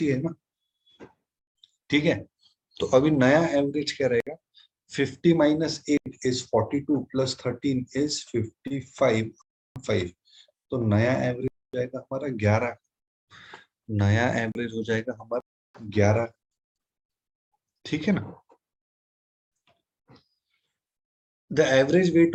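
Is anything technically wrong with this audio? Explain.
Yes, there are two kinds of dropout.

Blocks of digital silence at 4.20, 5.97, 9.42, 11.48, 14.52, 15.40 and 16.43 s run from 32 to 341 ms. The output buffer likely wasn't filled in time, so the sound drops hard to silence. The 85 ms and 341 ms gaps fit 4096- and 16384-sample buffers.

A short stall from a late packet at 8.67 s holds the last sound for 31 ms while the jitter buffer waits. Nothing goes missing, but it's an audible smear.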